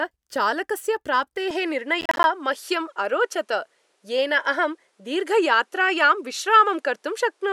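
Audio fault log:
1.51–7.53 s, input switched to a poorer device: from 1.51 s, with no silence at the change, the sound turns duller, nothing above 12.3 kHz remains, the level steps by about 5 dB, and a new noise floor appears about 45 dB down. A likely mid-recording device change. Spectrograms show a hard ceiling at 12.3 kHz.
2.01–2.24 s, processor overload crackle: a gritty burst of crackle where roughly ten audio buffers missed their deadlines and were left as silence, which fits buffers of about 10 ms. The waveform shows short flat dropouts with hard edges, and spectrograms show thin broadband vertical stripes.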